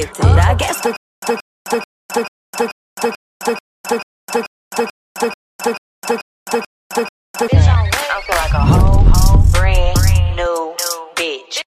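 Stutter with silent gaps runs from 0.96 to 7.48 s. One 178 ms fragment repeats 15 times, each followed by 259 ms of digital silence, in a steady 437 ms cycle. A stalled stream likely replayed its last fragment at each retry, and the audio in between is lost.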